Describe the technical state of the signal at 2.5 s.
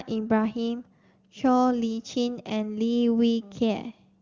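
At 2.5 s the speech is intact, carried cleanly by the AMR wideband (HD Voice) codec at 23.85 kbit/s, with no fault to be heard.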